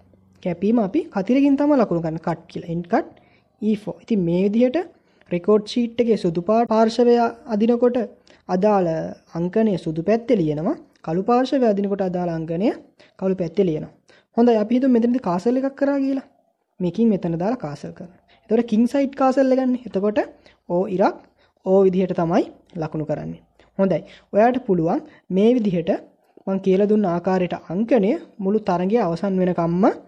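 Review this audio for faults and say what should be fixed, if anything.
Throughout the recording the sound is watery and swirly, with dulled treble, metallic chirps on bright transients and softened attacks, and this damage is plainly audible. The likely cause is MP3 compression at a low bitrate, roughly 64 kbps. Starved of bits, the encoder cuts off the highest frequencies and drops quieter frequency components that flicker in and out between frames, which produces the swirling texture. To prevent it, encode from the original at a higher bitrate or keep a lossless copy.

From 6.65 to 6.69 s a short glitch breaks the flow. This is damaged data in a compressed stream. Part of the encoded file was lost or corrupted, so the decoder misread the affected frames, lost its place and resumed only at the next valid frame header. To prevent it, transfer and store the file over a checksummed path and re-fetch any file that fails verification.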